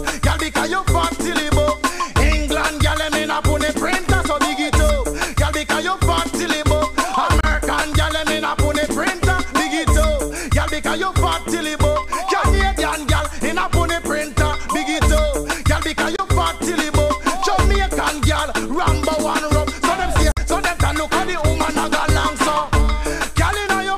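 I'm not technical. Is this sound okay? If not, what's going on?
No. There are Bluetooth dropouts at 7.40–7.45 s, 16.16–16.20 s and 20.31–20.39 s, where the sound briefly cuts to silence and then carries on as if it had kept playing. The likely cause is wireless audio data arriving too late and being skipped. The last gap is roughly twice as long as the others.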